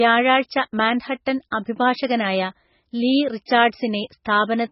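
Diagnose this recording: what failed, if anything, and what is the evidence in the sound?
The failure is at the codec stage, and it runs through the whole speech clip. The sound is heavily degraded: dull, watery and swirly, with a hard treble ceiling and nothing above 5.6 kHz. That pattern is most likely MP3 compression at a very low rate, consistent with around 16 kbps. With so few bits, the encoder drops the top band and zeroes weak frequency lines that come and go frame by frame. A spectrogram would show a flat cutoff at 5.6 kHz with flickering, patchy holes beneath it.

The same codec stage causes a pre-echo at 4.25 s. A brief hiss of roughly 10 ms arrives just ahead of a sharp attack, and the onset sounds softened. The coder spread quantisation noise across its whole block, so noise sized for the loud attack also filled the quiet moment before it. On the waveform this looks like a fuzz of noise just before the transient's edge. 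The spectrogram would show a broadband smear leading into the onset.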